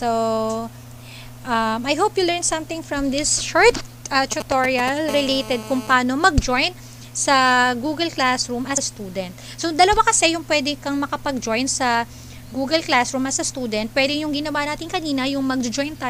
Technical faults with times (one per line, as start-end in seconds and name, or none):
4.32-4.89 GSM signalling bursts
5.09-5.94 GSM phone buzz